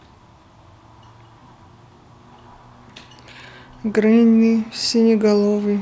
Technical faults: none

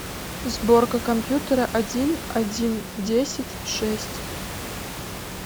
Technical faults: none

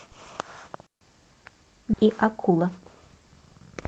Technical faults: digital wireless dropout; skip ahead; jitter buffer speed-up

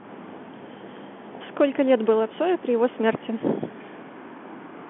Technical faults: none

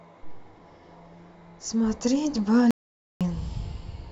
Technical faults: audio dropout to silence

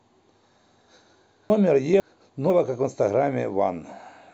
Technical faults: chunks out of order

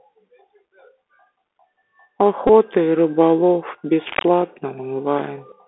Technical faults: Bluetooth CVSD headset codec; Bluetooth headset packet repeated; cable scratch noise

